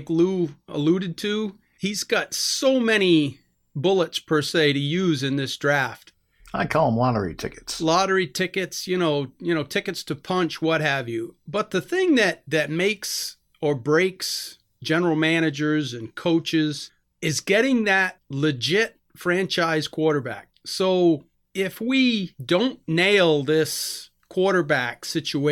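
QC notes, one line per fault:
Nothing stood out on listening to the speech in this recording.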